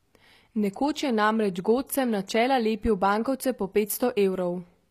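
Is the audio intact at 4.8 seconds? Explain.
No. At 4.8 s, as across the whole clip, the speech carries plainly audible damage that is likely HE-AAC compression at a low rate, consistent with roughly 24 kbps. Only the lower spectrum is truly coded; the treble is rebuilt by copying lower bands upward, so s sounds come out gritty and metallic. A spectrogram shows repeated, smeared-looking upper bands with misaligned harmonics and nothing above about 14.9 kHz.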